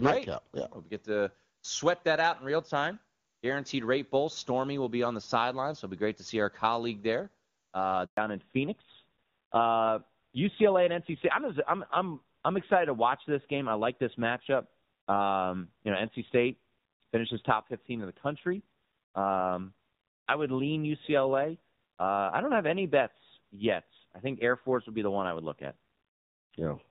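At 8.05 s, just after "our colleague there uh", a handover gap silences the speech for 120 ms. The call switched networks, and no frames arrived meanwhile.

From 8.17 s to the end, the call falls back to narrowband. Nothing above 4 kHz remains. The HD Voice clarity before the switch gives way to a duller, rougher voice.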